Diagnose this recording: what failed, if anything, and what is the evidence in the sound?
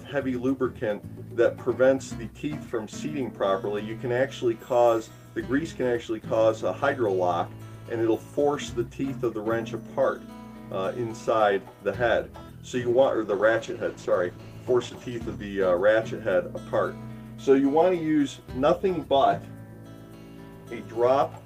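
Call bitrate drop, at the codec stage driven by the network's bandwidth estimate. From 12.89 s to 15.57 s the sound turns coarser and rougher, with a watery texture, for about 2.6 s before quality recovers. That points to the Opus encoder being told to cut its rate from around 32 kbps to roughly 14 kbps after the bandwidth estimate fell. With fewer bits per frame, the spectral detail is quantised coarsely until the rate climbs back.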